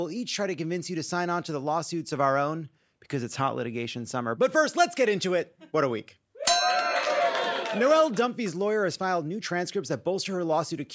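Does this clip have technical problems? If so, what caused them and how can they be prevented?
No, this clip has no technical problems, so there is nothing to prevent.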